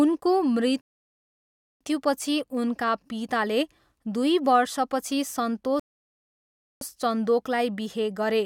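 Two rebuffering stalls interrupt the speech. The first runs from 0.81 s to 1.81 s. The second runs from 5.80 s to 6.81 s. Each time, the player ran out of downloaded audio and had to wait for more. The speech drops into silence for about one second. It then picks up exactly where it left off. Nothing is skipped. Each stall simply adds time, about 1.0 s in both cases.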